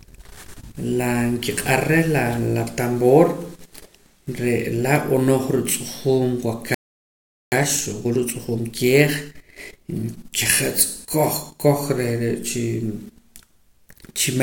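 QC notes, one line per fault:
6.74 to 7.52 s, playback stall: the speech just cuts out mid-flow for about 0.78 s of dead silence, then resumes. Most likely the player ran dry of buffered data or its audio thread got blocked, so nothing reached the output until it recovered.
7.52 to 10.52 s, time-compressed catch-up: right after the gap, leading into "koj koj", the speech runs hurried at about 1.25x for three seconds with pitch unchanged. The player is trimming its backlog by splicing out small chunks and cross-fading.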